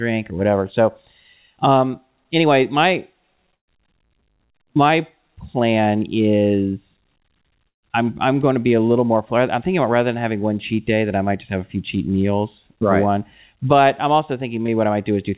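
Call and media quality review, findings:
Burst of packet loss at 3.54–3.69 s, right after "um anyway my", and 7.67–7.84 s, just before "I'm I'm going to". Jitter buffer/decoder side. Roughly 140 and 160 ms dropped, last sound stretched and faded, then a near-silent hole and a skip ahead.

Short concealed packet loss at 14.66–14.71 s, after "I'm also". About 20 ms never arrived. Concealment patched it by continuing the prior sound, then crossfaded back. Heard as a quick smear, with the timing nudged slightly late. Band-limited audio, nothing above 4 kHz, fits a G.711 A-law path.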